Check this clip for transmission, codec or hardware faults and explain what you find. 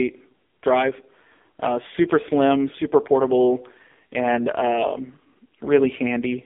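One fault runs through the whole clip. AMR narrowband mobile codec, throughout: the speech is squeezed into a phone line band of roughly 250 Hz to 3.5 kHz, with nothing above 3.6 kHz. Heavy vocal-tract modelling makes it buzzy and synthetic, which points to a low mode near 5.9 kbps.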